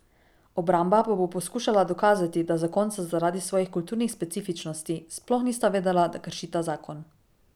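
No technical faults are audible.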